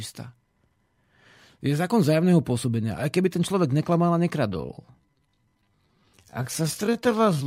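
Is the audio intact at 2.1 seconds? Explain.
Yes, the speech at 2.1 seconds plays through intact, with no fault at that moment.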